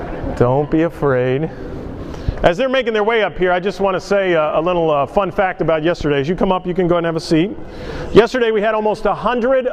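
At 6.01 s a phantom power thump appears and lasts until about 6.06 s. A supply voltage was switched on a live input. That sudden DC step passed through the coupling capacitors and reached the signal path. The result is a single deep, low thud. It peaks at about -11 dBFS. The thump dies away quickly, decaying over roughly 11 ms, so it is heard as a short, blunt knock.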